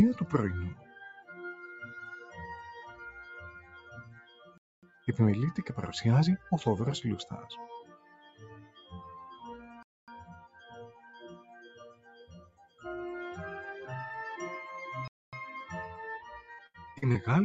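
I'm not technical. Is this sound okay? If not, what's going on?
No, there are four kinds of problem.

A noise suppressor applied to music or sounds was left on the whole time. It is built for calls with people talking, so it treats steady tones, room ambience and fading tails as noise and turns them down. Sudden hits still get through, but anything held sinks, so the sound keeps swelling and shrinking instead of staying even.

In five places you can hear sound cut by the noise suppressor: 0.75 to 1.34 s, 3.49 to 5.07 s, 7.83 to 8.92 s, 10.38 to 10.72 s, and 10.89 to 12.81 s. In these stretches the sustained parts drop away noticeably and their endings are clipped short. The later stretches lose the most. Unlike a gap, the sound never stops completely. It just goes thin and faint.

There is also a gap between chunks three times, at 4.58 s, 9.83 s and 15.08 s. Each is a quarter-second of dead silence, and they come every five and a quarter seconds. 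That pattern shows the audio was handled in five-second pieces with a pause left at each join. Nothing is patched over here. It is plain silence.

Finally, from 16.52 to 17.17 s there is repeated packet loss, which gives a robotic sound. Bits of audio went missing four times in quick succession, the longest for about 75 ms. Each hole was filled by stretching out the sound just before it, so instead of clean silence you hear a choppy stutter. That sets it apart from the chunk gaps.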